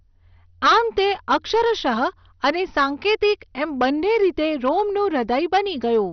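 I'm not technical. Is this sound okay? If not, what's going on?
No, there are two problems running through the whole clip.

The first is hard clipping. The recording was pushed far louder than the equipment could handle, so the tops of the loudest moments got sliced off flat. Only a small share of the sound is hit, so it comes across as crackle and brief rasping on the strongest parts of the speech. A worn or buzzing speaker makes a steady fuzz on everything, but this appears only on the peaks.

The second is a dull, murky quality that sounds like heavy MP2 compression, likely from saving the audio at a very low quality setting. This older format divides sound into slices by pitch and drops the highest ones when squeezed hard, so nothing above about 6.2 kHz survives and the remaining slices turn grainy and gurgly. That explains the muffled, watery character. A simply muffled recording would sound soft but clean, while this sounds muffled and warbly together.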